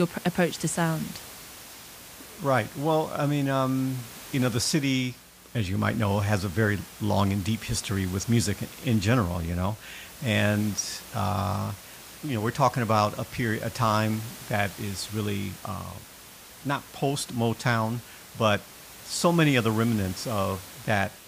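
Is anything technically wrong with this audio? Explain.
No, nothing technically wrong turns up in this speech. Room noise sits underneath it at about 18 dB below the speech, and that comes from the recording space rather than from the system.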